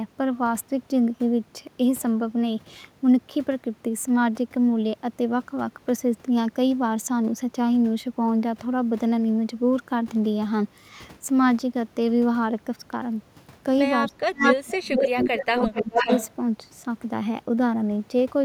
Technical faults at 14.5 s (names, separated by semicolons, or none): speech suppressed in double talk; echo leak